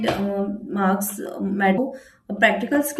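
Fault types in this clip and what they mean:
Stream segment skipped: at 1.77 s the speech jumps ahead with a brief blip, likely a lost stream segment; the waveform shows an abrupt discontinuity.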